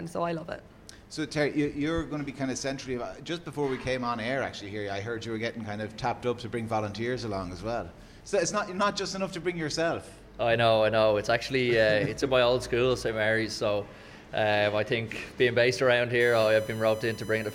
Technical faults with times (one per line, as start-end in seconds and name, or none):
16.20-17.54 USB whine